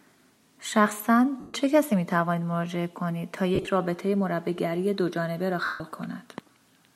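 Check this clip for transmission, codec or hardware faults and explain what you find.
The speech has three dropouts from lost LE Audio frames. A light layer of lossy compression also sits under the whole clip.

From 1.40 to 1.54 s, 3.55 to 3.67 s and 5.65 to 5.80 s, the LC3 decoder lost incoming Bluetooth LE Audio frames and had to conceal the gaps. It repeats the last good spectrum with randomised signs, then fades it. The first and third gaps are solid losses of about 140 ms and 150 ms, long enough for the held sound to blur into noise and sink toward silence. The middle one is scattered, about 70 ms lost over 120 ms with runs of roughly 30 ms at most, so it sounds like brief rough flutters.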